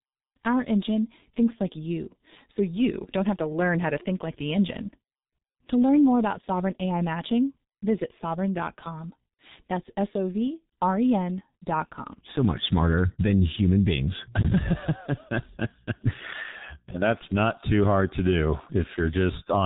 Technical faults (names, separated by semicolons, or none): G.723.1 codec